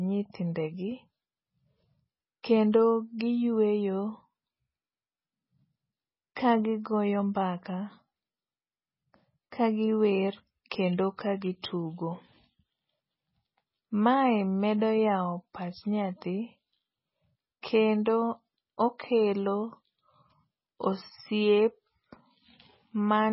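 Throughout the speech, everything above 5.6 kHz is missing, so the sound is dull and muffled, with a watery, swirling texture and metallic chirps on s sounds. The likely cause is heavy MP3 compression at a very low bitrate, around 16 kbps, where the encoder removes the treble and drops weak frequency lines from frame to frame. At 2.72 s and again at 11.62 s, a brief hiss comes just before a sharp attack, which sounds softened and smeared. This is pre-echo. The codec spreads its quantisation noise across a whole block, so noise scaled for the loud attack spills into the quiet moment ahead of it, about 18 ms early the first time and 13 ms the second.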